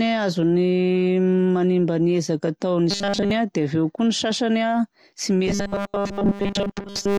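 At 2.91 s the speech turns into robotic sound from repeated short buffers until 3.31 s, and it's wall-to-wall buzz for that whole stretch. It comes back right after "ny sasany a tsy" at 5.47 s and runs to the end, covering most of that section. The fixed 200 Hz drone points to a 5 ms chunk looping while fresh audio is skipped, likely a starved playback buffer. It sounds rigid and metallic, loosely tracking the syllables.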